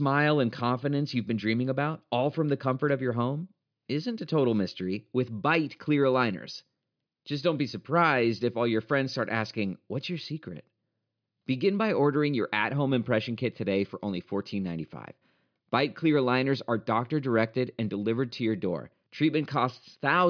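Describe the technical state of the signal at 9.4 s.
At 9.4 s the speech signal is intact, with no dropout, distortion, glitch or other technical fault to be heard at that moment.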